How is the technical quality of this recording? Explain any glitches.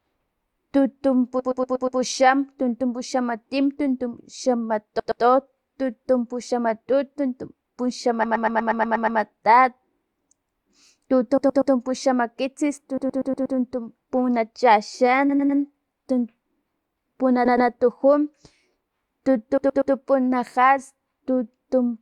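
The recording has a recurring stutter caused by repeated frames: eight times, a short run of compressed frames was delivered more than once, so the decoder replays the same slice of speech back to back, and the clip is lengthened by each repeat.

1.39 to 1.99 s: a 120 ms block plays five extra times, adding 600 ms.
4.99 to 5.23 s: a 120 ms block repeats twice more, adding 240 ms.
8.23 to 9.19 s: the longest, with a 120 ms block played eight extra times for 960 ms of added stutter.
11.37 to 11.73 s: a 120 ms block repeats three more times, adding 360 ms.
12.97 to 13.57 s: a 120 ms block plays five extra times, adding 600 ms.
15.29 to 15.59 s: a shorter 100 ms block repeats three more times, adding 300 ms.
17.45 to 17.69 s: a 120 ms block repeats twice more, adding 240 ms.
19.57 to 19.93 s: a 120 ms block repeats three more times, adding 360 ms.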